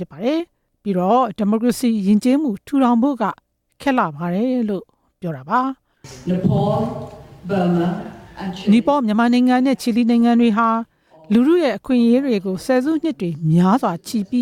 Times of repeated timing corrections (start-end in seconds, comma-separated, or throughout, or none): 0.07-14.25